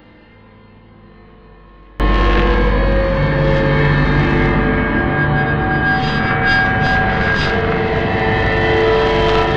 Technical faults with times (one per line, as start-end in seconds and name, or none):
0.00-2.00 one channel inverted